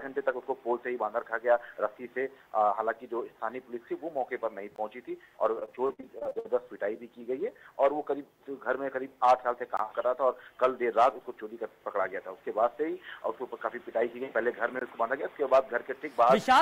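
At 4.76, 9.77 and 14.79 s, 20 ms holes cut the sound. It's a gap between chunks: silence at each join of 5 s chunks, heard as hard-edged dropouts.

From 5.59 to 6.47 s there is repeated packet loss, giving robotic sound. Eleven holes, the longest 55 ms, are patched by repeating earlier sound, so about a third is filled.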